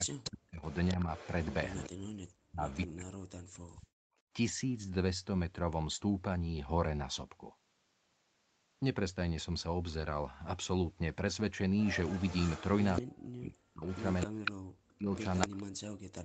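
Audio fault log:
0.0–1.09 s, 1.89–4.06 s, 13.0–16.25 s speech suppressed in double talk: the speech sinks by as much as about 40 dB. This is likely an echo canceller that, while both ends talked at once, could not separate this talker from loudspeaker echo and turned everything down.
0.24–1.9 s, 2.71–2.87 s, 11.79–13.02 s, 13.86–14.51 s, 15.14–15.63 s echo leak: a copy of the speech trails 258 ms behind. It starts at about 20 dB below the speech, rises to about 15 dB below near 12 s, and reaches only about 5 dB below after 13.86 s. This is likely loudspeaker pickup that the loudspeaker side's canceller failed to remove.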